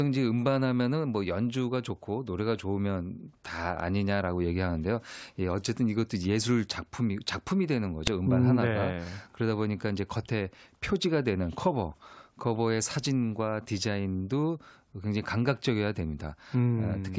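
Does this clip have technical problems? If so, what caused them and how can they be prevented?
Yes, a file header is played as audio at 8.07 s: header bytes of a joined WAV piece are decoded as samples, producing a sharp, loud click. Prevent it by stripping each piece's header before concatenating or streaming.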